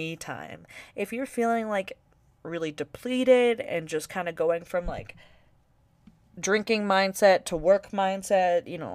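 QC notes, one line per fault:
No technical faults are audible anywhere in this speech recording.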